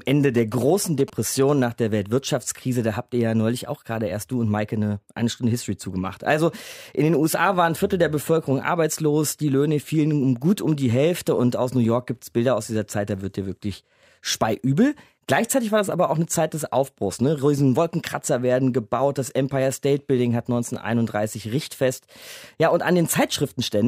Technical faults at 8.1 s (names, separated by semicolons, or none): none